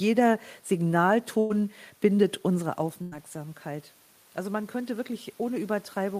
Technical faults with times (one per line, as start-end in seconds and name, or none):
1.39-1.62 burst of packet loss
1.90-2.24 jitter buffer speed-up
2.50-6.20 automatic gain rising
3.02-3.17 burst of packet loss
4.81-5.56 jitter buffer speed-up